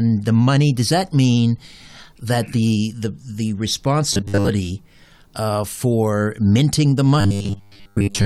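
From 4.13 to 4.49 s, and again from 7.21 s to 8.26 s right after "uh for minting the", the speech collapses into robotic sound from repeated short buffers: a rigid, metallic 100 Hz buzz that still loosely tracks the syllables. The likely cause is audio arriving too seldom, so roughly 10 ms chunks are looped and most of the real signal skipped. Unlike a crackly dropout, the fixed pitch stays steady throughout.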